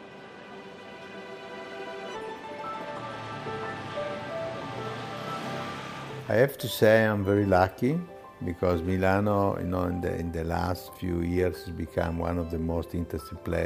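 Nothing goes wrong anywhere in this clip, so there's no technical fault to point to at any moment in it.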